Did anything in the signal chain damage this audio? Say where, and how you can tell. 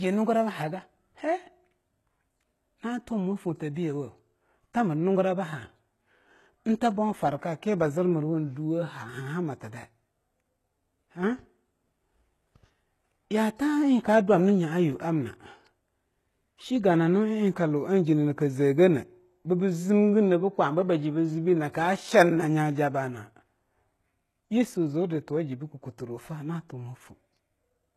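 Yes, at the codec stage, likely HE-AAC compression at a very low rate, around 16 kbps. Throughout, the speech has nothing above 12.3 kHz, and its sibilants sound gritty and metallic because the treble is rebuilt from copied lower bands whose harmonics don't line up with the real ones.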